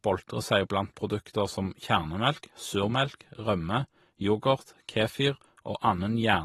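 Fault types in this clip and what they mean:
AAC compression: present throughout the speech, most likely from AAC-LC encoding. The codec splits the signal into blocks of frequency lines and quantises them coarsely against a hearing model. It discards detail judged inaudible, and when bits run short it trims the top of the spectrum. Here nothing survives above 12.4 kHz, so the speech sounds dulled, and the coding damage is plainly audible, which fits a low bitrate of around 37 kbps.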